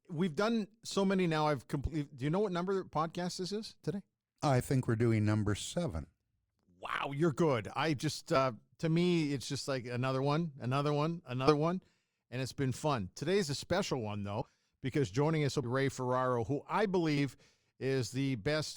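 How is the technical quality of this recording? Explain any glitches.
The recording has repeated compressed frames skipped, eight in all, at 1.87–1.90, 4.39, 6.03–6.07, 8.35–8.39, 11.47–11.54, 14.41–14.47, 15.63–15.67 and 17.17–17.19 s. At each point a handful of coded frames never reached the output, so the speech leaps forward by something like a tenth of a second, with jump sizes pointing to 20 ms frames.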